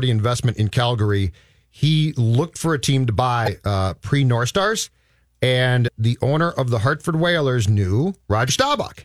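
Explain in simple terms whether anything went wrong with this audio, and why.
Damaged data in a compressed stream: the file lost its place three times, at 3.44–3.48 s (after "for a team to", before "uh pre"), 5.84–5.89 s (just before "the owner of the") and 8.45–8.50 s. At each spot the speech breaks into a brief chirp or blip.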